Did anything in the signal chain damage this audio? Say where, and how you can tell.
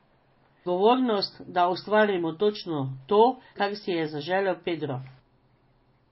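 Yes, at the codec: likely MP3 compression near 24 kbps. Nothing reaches above 5.6 kHz throughout, and a watery swirl distinguishes it from plain low-pass filtering.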